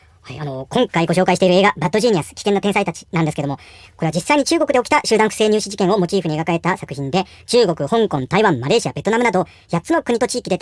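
Speech, played back at the wrong sample rate for its whole length. Everything runs 1.5 times too fast and sits about 7 semitones high, giving a hurried, chipmunk-like voice. That fits audio recorded at 16 kHz but played at 24 kHz without any rate conversion.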